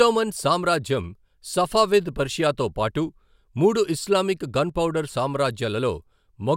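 A speech clip with one brief fault: one channel drops out from 4.69 to 4.75 s, just after "పర్షియాతో పాటు మూడు ఇస్లామిక్". For about 50 ms the level dips abruptly by about 6 dB, then returns. The likely cause is a stereo channel going silent before the signal is summed to mono. Sound shared by both channels loses half its contribution, hence the 6 dB fall. Anything present only in the missing channel vanishes for that moment.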